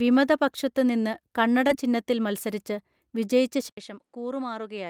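At 1.67 to 1.71 s, between "വിമത പക്ഷത്ത് നിന്ന് കണ്ണട" and "ചിഹ്നത്തിൽ മൽസരിച്ച് വിജയിച്ച", short concealed packet loss: about 14 ms is synthesised from preceding speech, then 20 ms drops out, giving a brief smear.

From 3.69 s, after "കണ്ണട ചിഹ്നത്തിൽ മൽസരിച്ച് വിജയിച്ച", an 80 ms silence, then duller audio with nothing above 11.1 kHz, level down about 10 dB, and faint new noise, likely the input switched to a poorer device.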